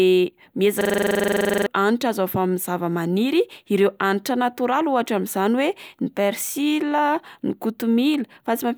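From 0.81 to 1.66 s a system hang loop kicks in: the system froze, so one 43 ms slice, fitting a 2048-sample buffer, stutters twenty times at 23.4 Hz.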